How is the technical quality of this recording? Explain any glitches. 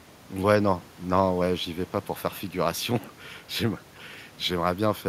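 No technical glitches can be heard in this speech recording. There is nothing to explain, as no fault turns up anywhere in the audio.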